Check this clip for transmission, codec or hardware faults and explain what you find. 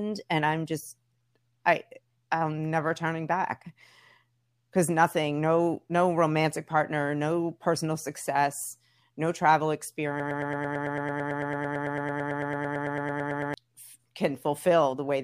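There is one fault. From 10.2 to 13.5 s, after "personal success no travel", a broken-record loop: the stream likely stalled, so one 111 ms fragment repeats 30 times, replacing the lost speech.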